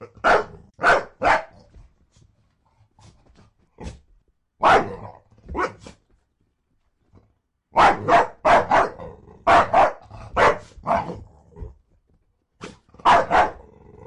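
Listening closely to these everyday sounds, nothing stood out as a technical fault.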